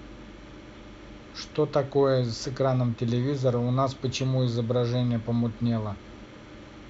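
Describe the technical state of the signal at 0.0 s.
At 0.0 s the speech signal is intact, with no audible fault at that point.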